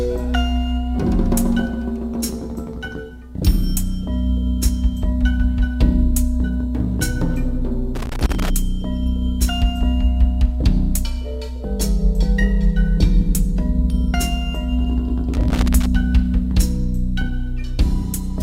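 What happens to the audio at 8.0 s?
At 8.0 s the audio breaks into loose connector crackle, from 7.95 to 8.50 s. A worn contact rapidly makes and breaks, chopping the signal and adding pops, heard as irregular scratchy crackle. A waveform shows jagged dropouts and spikes; a spectrogram shows scattered broadband vertical streaks.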